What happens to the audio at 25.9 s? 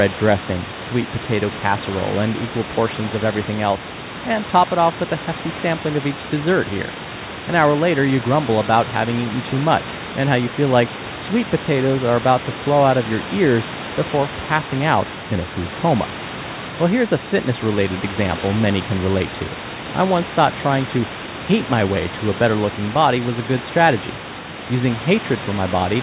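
Nothing goes wrong at 25.9 s; the speech there is intact.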